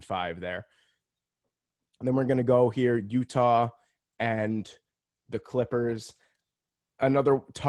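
Speech carried over an Opus call path shows a call bitrate drop starting at 3.35 s, right after "we're gonna go here," and lasting until 7.53 s. The texture turns coarse and watery, consistent with the encoder falling from 32 to 18 kbps and holding its lowest rate for about 3.1 s. Unlike packet loss, there are no gaps or glitches, just rougher coding until the rate recovers.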